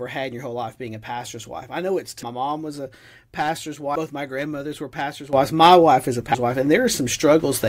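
Speech runs with three brief jumps where the talk lurches forward: at 2.22 s, between "wife I know it's" and "mom was a pastor's"; at 3.95 s, just after "mom was a pastor's"; and at 6.34 s. The jumps lose roughly 300, 150 and 200 milliseconds, which fits whole 21.3 ms compressed frames being skipped. At 5.33 s, right after "my grandmothers were pastor's", voice and background noise together step up by about 12 dB and stay there to the end, likely a sudden gain jump applied without a ramp.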